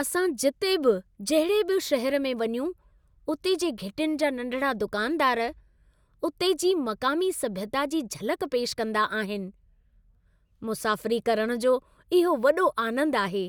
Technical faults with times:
none

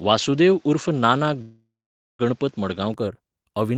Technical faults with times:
0.00-2.94 input switched to a poorer device
1.41-2.21 call audio freeze

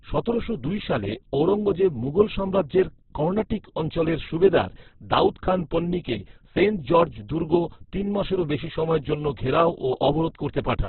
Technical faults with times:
0.00-10.89 Opus compression

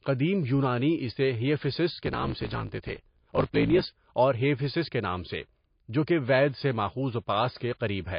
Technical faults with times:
0.00-8.19 MP3 compression
2.03-3.99 block size mismatch (truncated)

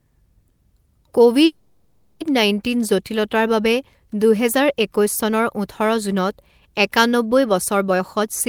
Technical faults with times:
1.45-2.22 call audio freeze
7.91-8.24 jitter buffer speed-up

